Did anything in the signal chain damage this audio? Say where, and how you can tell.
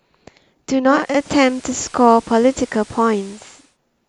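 Yes. At reception, the radio's digital decoder lost lock and it performed a digital radio blend to analogue, cross-fading over about half a second into the FM broadcast at 0.84 s and back at 3.78 s. During that span FM hiss sits roughly 25 dB below the speech, and the level shifts by about 2 dB. A codec dropout would cut in abruptly and leave gaps; here both transitions glide smoothly, with hiss added between them.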